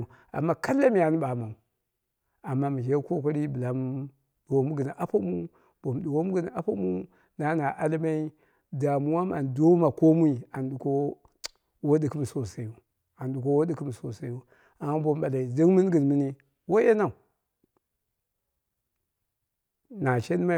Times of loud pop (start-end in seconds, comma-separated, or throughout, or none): none